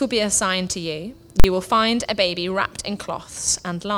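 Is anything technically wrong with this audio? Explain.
Yes. At 1.40 to 1.44 s there is one sudden, very loud bang. It comes from invalid numbers at full scale: a calculation produced infinite or invalid values that were pinned at maximum level for about 43 ms, which fits a 2048-sample processing block.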